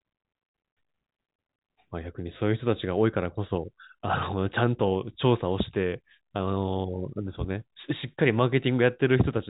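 Nothing goes wrong anywhere in this speech, which comes across with the narrow, top-trimmed sound of ordinary G.711 telephone coding, nothing reaching above about 3.8 kHz.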